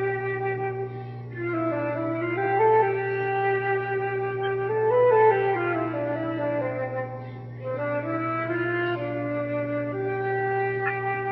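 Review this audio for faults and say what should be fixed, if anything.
There's mains hum running the whole way through, a steady 60 Hz drone sitting only around 10 dB under the sound, probably from a ground loop or nearby transformer. Fix it with balanced cabling, a shared ground point, and keeping gear away from power supplies.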